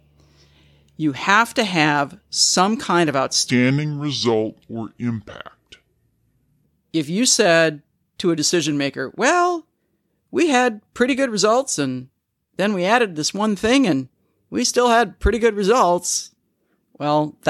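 After "have some kind of", 3.5 to 6.64 s runs at the wrong speed, 0.764 times, dragging about five semitones deep, likely a clock mismatch.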